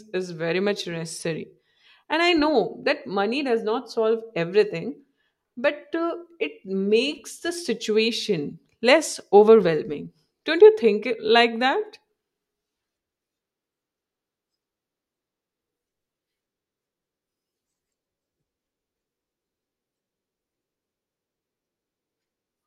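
No technical faults can be heard anywhere in the speech recording. There is nothing here that needs a time stamp or an account of something going wrong.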